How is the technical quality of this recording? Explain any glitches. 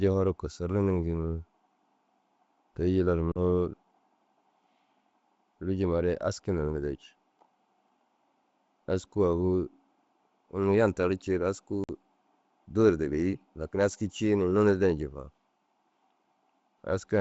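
The recording is a wideband speech call carried by G.722 at 64 kbit/s. The codec leaves at most faint traces, but the call has two glitches.

Packet loss on an ADPCM call occurs at 3.32 to 3.38 s and again at 11.84 to 11.90 s, right after "unnu yan tardi ciiru". A handful of packets went missing each time, about 40 ms and then 50 ms of audio, and silence filled the gaps. Because ADPCM codes each sample as a change from a predicted value, the receiving decoder's predictor and step size lost track of the sender's during the gap. Each dropout is a hard-edged hole. The speech then comes back with brief, slight distortion until the decoder realigns.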